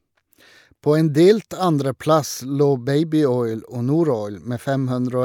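Listening closely to the speech, nothing stood out as a technical problem at any point.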